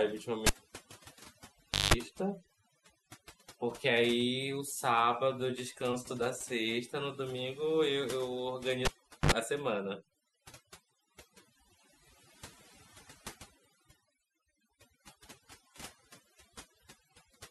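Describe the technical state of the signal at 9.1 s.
At 9.1 s the signal sits inside a cable pulled and plugged in event running from 8.85 to 9.32 s. A pop opens roughly 0.42 s of near silence. About 60 ms of 50 Hz mains buzz appears while only the plug tip touches, and a second pop closes the gap. The buzz and the paired pops set it apart from a plain digital dropout.

Overdone noise removal runs through this moment as well. Frequency bands close to the estimated noise floor are pushed down or shut off, taking the quieter parts of the voice with them. The background becomes near silence dotted with twinkling specks. Because the specks follow the noise floor rather than the loudness of the voice, this is not ordinary codec smearing.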